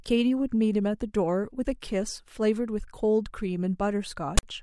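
At 4.38 s, near the end of the speech, the decoder reaches a block of file tags and plays it as samples. This is the fault of file tags played as audio. The text bytes come out as a loud, harsh rasp pushed off-centre to one side. The zero padding behind the text then plays as a brief silence. The burst runs to 4.43 s, about 55 ms, with hard edges at both ends.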